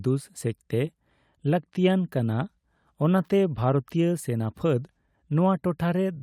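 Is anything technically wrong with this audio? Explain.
Yes. From 5.59 to 5.63 s there is a short concealed packet loss: about 20 ms of the speech failed to arrive in time, and the decoder synthesised roughly 17 ms by extending the preceding sound before crossfading back. It comes through as a brief smear or wobble.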